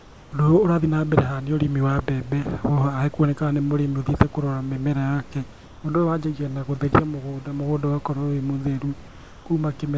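From the start to 0.32 s, the background sounds like comfort noise in place of the real room sound. The hiss is steady and flat, without the small shifts of a real room. It sits about 25 dB below the loud speech and is about 1 dB quieter than the true background. The likely cause is discontinuous transmission: the sender went silent, and the receiver filled the gap with synthetic noise. Through the call path, nothing is heard above 8 kHz.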